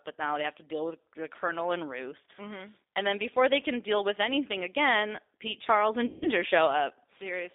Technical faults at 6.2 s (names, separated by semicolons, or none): G.729 codec; VoIP packet loss concealed by the speech codec